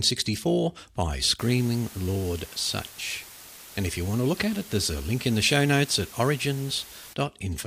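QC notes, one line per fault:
1.39–7.13 s, low bit depth with dither: the speech drops to a 6-bit word length with dither applied before rounding, so quantisation error becomes a steady, even hiss about 20 dB below the signal, with no distortion. Spectrogram shows a flat broadband noise floor across this span; waveform gaps between phrases fill with fuzz.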